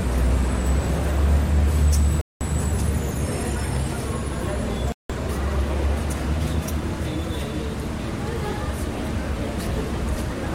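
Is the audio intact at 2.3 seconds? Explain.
No. A Bluetooth stall silences the sound from 2.21 to 2.41 s, likely because interference delayed packets until the headphone buffer emptied. It is a complete gap of about 0.2 s, not the garbled patch that packet-loss concealment would produce.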